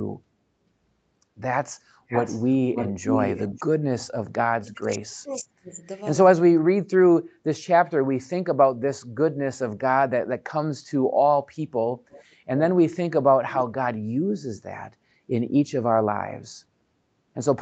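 From 2.08 to 2.54 s and again from 2.74 to 3.64 s there is an echo leak: a copy of the speech returns 583 ms late, about 10 dB and then about 5 dB below it. It is likely from a loudspeaker echo the far-end canceller missed, and shows as ghosted, time-shifted harmonic traces on the spectrogram.

From 4.26 to 5.85 s comes speech suppressed in double talk, likely an echo canceller ducking both talkers at once. Level drops by up to about 40 dB, leaving gaps in the waveform envelope.

At 12.1 to 12.24 s a brief echo leak returns 685 ms late, about 25 dB down.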